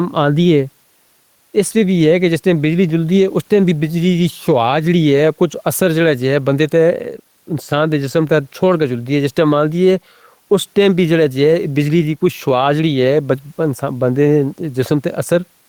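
Gain pumping runs through the whole speech recording from start to finish. The gain swings somewhere around 5 dB. The likely cause is input gain set too hot with a fast limiter or compressor clamping down on the peaks. The room noise sits about 45 dB under the speech, and the speech itself comes out flattened and squashed.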